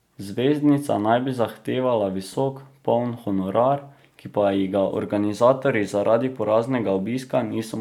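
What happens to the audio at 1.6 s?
At 1.6 s the speech carries on intact, with no dropout, click, distortion or other audible fault.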